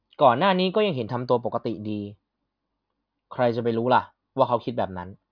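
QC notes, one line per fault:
Nothing to flag here; the speech comes through with no faults to report.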